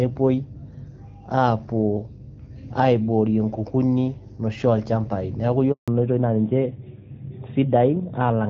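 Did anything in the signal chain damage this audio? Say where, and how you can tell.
Yes. A steady 50 Hz mains hum, roughly 20 dB below the speech, runs throughout; that points to the analogue wiring, where a ground loop or nearby transformer couples in the power line.

From 5.72 to 5.88 s the speech drops out for 160 ms, a handover gap at the network stage while the call switched links and no speech frames arrived.

From 5.88 s to the end, everything above 4 kHz is gone and the voice turns duller: a fallback to narrowband, AMR-WB dropping to the older narrowband AMR codec.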